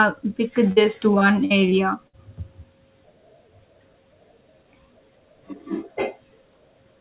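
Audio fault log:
0.72–2.15 s, repeated packet loss (robotic sound): over this span of speech, six short holes open in quick succession, the longest about 59 ms, and together they cover roughly a seventh of the stretch. Each hole is papered over by stretching the sound just before it, so the result is choppy with pieces missing rather than silent. That filled-in, choppy texture, recurring within about a second and a half, sets it apart from a single dropout or plain gaps of silence. Everything sits below 4 kHz, which fits a narrowband call codec such as G.711.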